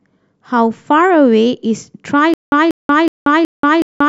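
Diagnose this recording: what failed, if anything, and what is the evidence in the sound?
The speech plays cleanly up to about 2.34 s, then breaks into a stutter with silent gaps that runs to the end: a burst of roughly 190 ms repeats four times, each followed by about 180 ms of dead digital silence, so it pulses every 370 ms or so. That points to the playback or streaming buffer, likely a stall where each retry replayed the last fragment and then ran dry. Whatever should have followed 2.34 s is simply gone.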